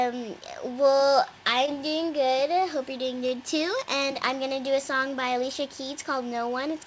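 At 1.66 to 1.69 s a short concealed packet loss briefly smears the sound. About 20 ms never arrived, and the receiver bridged the gap by extending the preceding sound before blending back. Unlike a plain dropout, there is no silent hole or hard click, only a brief wobble. The G.722 call path limits the band to 8 kHz throughout.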